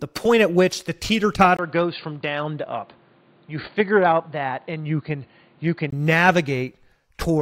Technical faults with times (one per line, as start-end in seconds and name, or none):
1.57-5.92 input switched to a poorer device